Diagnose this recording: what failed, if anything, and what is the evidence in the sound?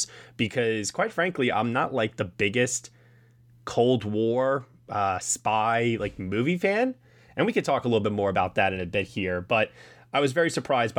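Nothing in this speech recording points to a failure at any stage of the chain. No event in the sound marks a point where the signal path broke down or misbehaved.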